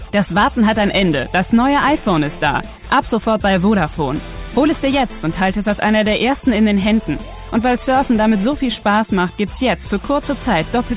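No dropouts, clicks, distortion or timing defects are audible anywhere in the clip.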